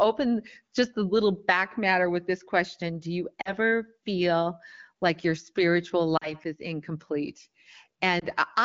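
At 3.41 to 3.51 s, just before "feel like your spiritual", there's a short drop to near silence from lost AMR speech frames. The decoder lost about 40 ms, which fits two 20 ms frames, and papered over the gap by repeating the last good pitch and vocal tract settings at falling gain. It happens again at 6.17 to 6.34 s, between "feel like your spiritual" and "is incomplete", and once more, more briefly, at 8.19 to 8.25 s, in speech otherwise clear under the 15.85 kbit/s AMR-WB codec.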